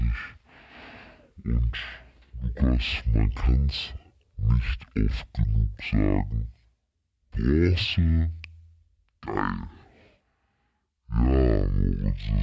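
A speech recording plays with a wrong sample rate from start to finish. Everything runs at half speed and sits a full octave low, about 12 semitones down. Speed and pitch drop together with no conversion, which fits 32 kHz audio played back at 16 kHz.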